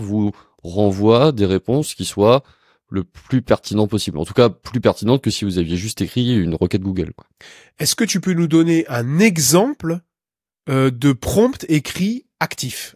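No dropouts, clicks, distortion, level jumps or timing glitches can be heard anywhere in the speech.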